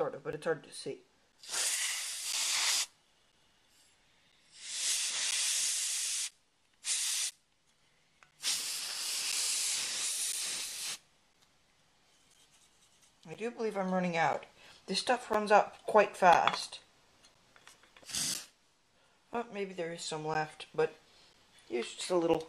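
A regular tick or small pop lands once every second from 0.32 s to 22.35 s, around twenty in all, each a brief hole where the sound simply stops for roughly ten milliseconds. These are periodic USB or driver dropouts: something on the system repeatedly stalls the USB bus or audio driver at a steady 1.0 s interval, and the samples due during each stall are lost and replaced with silence, leaving evenly spaced gaps.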